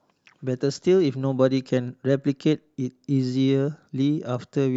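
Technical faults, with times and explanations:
Nothing technical goes wrong anywhere in this bit of speech, so there's no fault to point to.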